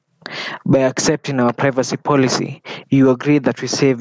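From start to finish the speech shows gain pumping, with the level swinging by around 20 dB. The likely cause is input gain set far too high, with a fast limiter or compressor clamping down on each peak. Loud and quiet passages sit squashed close together. Everything sits within the call path's band, with nothing above 8 kHz.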